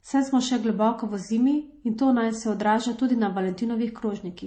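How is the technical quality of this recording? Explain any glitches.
The recording suffers from transcoding between lossy codecs throughout. The speech has a warbling, coarse texture with a swirly, smeared top end, and nothing above 18.4 kHz. The likely cause is a low-bitrate MP3 re-encoded to HE-AAC, which spent bits on the earlier damage and added its own.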